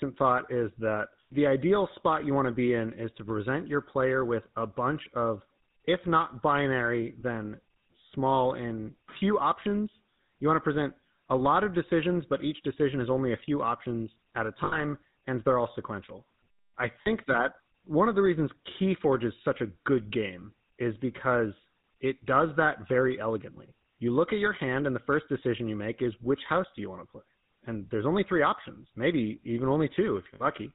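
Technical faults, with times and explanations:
Throughout: GSM full-rate codec. The speech has a buzzy, gravelly roughness, and nothing reaches above 4 kHz. It fits a 13 kbps GSM full-rate stream. This codec models the vocal tract as a filter. It drives that filter with evenly spaced pulses and keeps only one excitation sample in three. The fine detail of the voice is lost. The damage is plainly audible. Higher voiced sounds get the harshest grain.
14.64–14.83 s, 17.02–17.07 s, 30.34–30.42 s: lost GSM frames. The first falls between "few options at a" and "and they're all sequential". The second falls between "they're all sequential I" and "that one of the". The third is near the end. Each gap lasts 40 to 80 ms. The decoder fills it by repeating the last good frame. The sound hangs as a rough, metallic ring instead of dropping out.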